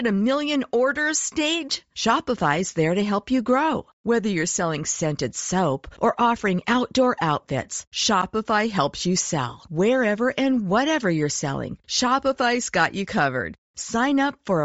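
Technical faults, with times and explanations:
Throughout, Bluetooth LC3 compression: the speech carries a plainly audible breathy, grainy edge across the whole clip, with the upper spectrum sounding thinned and replaced by a hiss-like texture instead of clean detail. This is the likely result of the LE Audio transform codec running at a modest rate, which fits roughly 32 kbps with 7.5 ms frames: high-band coefficients are zeroed and noise-filled, so sibilants and consonant detail smear into granular noise.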